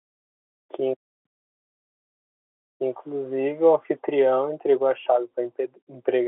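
No technical faults can be heard in this telephone-band speech.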